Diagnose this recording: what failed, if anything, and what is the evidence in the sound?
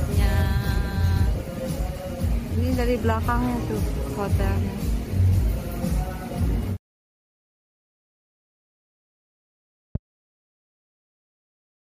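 A loud pop failed the recording. It occurs once, from 9.95 to 9.98 s, as a single sharp pulse lasting about 25 ms. It peaks at roughly 10 dB above the surrounding sound, which continues underneath without a break. The stage is likely the analogue wiring: a sudden voltage step, such as a plug being moved, a switch contact or a static discharge, was added to the signal. The following circuits then shaped it into this brief thump.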